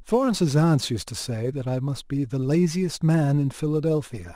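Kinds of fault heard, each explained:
Crude rate conversion: samples were dropped or repeated without filtering, in a pattern that fits a 48 kHz to 44.1 kHz change, adding gritty, inharmonic fizz roughly 30 dB below the speech. A spectrogram shows faint stray lines unrelated to the harmonics; the waveform shows small jagged steps.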